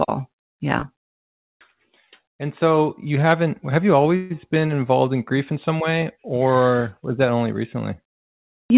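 At 4.16 s a call audio freeze, likely from delayed packets draining the jitter buffer, stretches the last sound for 140 ms into a fading buzz or hiss. The speech then resumes where it stopped, 140 ms late. A spectrogram shows smeared, repeating bands capped at 4 kHz; the waveform shows a decaying, regular stretch.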